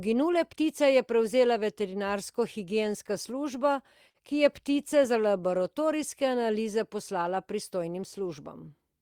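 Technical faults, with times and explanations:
4.09–4.18 s, short stall from a late packet: a packet arrived late, so the sound is stretched by about 52 ms before resuming. On a spectrogram, a frozen, smeared band.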